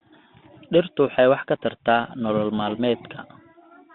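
Throughout, a Bluetooth CVSD headset codec's one-bit steps lag loud high sounds, leaving scratchy sibilants, granular hiss and a band of about 150 Hz to 3.7 kHz.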